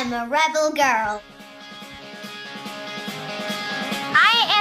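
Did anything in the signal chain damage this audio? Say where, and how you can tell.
No, nothing in the signal chain audibly damaged this audio.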